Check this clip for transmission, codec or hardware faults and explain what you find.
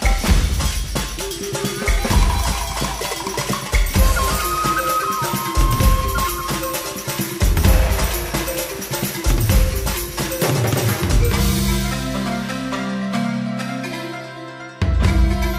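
No transmission, codec or hardware fault can be heard anywhere in the recording.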